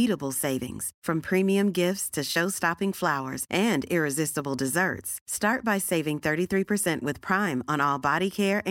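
No technical faults can be heard anywhere in this speech recording; the signal holds steady and continuous throughout.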